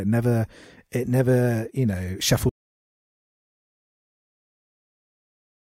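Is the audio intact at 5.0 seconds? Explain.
No. At 5.0 seconds you're inside an audio dropout to silence that starts at 2.49 s, right after "it never you know", and runs to the end of the clip. The speech just stops mid-flow and what follows is dead digital silence, not even room tone. That points to the input going away, likely a disconnected device, a dropped link or a stray mute, while the recorder kept writing zeros, so whatever was said there is simply gone.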